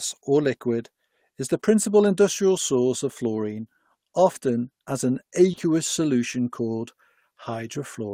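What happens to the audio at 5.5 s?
Short concealed packet loss hits at 5.51 and 5.55 s: two back-to-back 20 ms gaps, about 5.51 to 5.59 s, filled by extending prior speech. It sounds like a brief smear.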